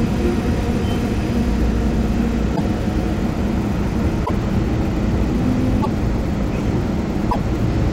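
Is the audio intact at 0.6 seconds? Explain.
Yes, at 0.6 s the sound is intact, with no fault present at that point.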